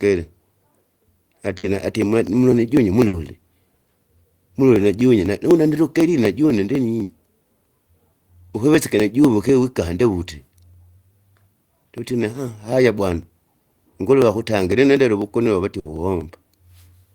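A speech recording with two separate problems. From 0.27 s right to the end there are periodic USB or driver dropouts: a tick every 0.25 s, heard only while there's signal, where a sliver of audio is skipped as the bus or driver gets blocked on a fixed schedule. On top of that, four bursts of packet loss at 1.57, 3.07, 7.03 and 15.79 s each produce about 60 ms of held, fading concealment sound, then the audio jumps ahead with roughly 60 ms missing.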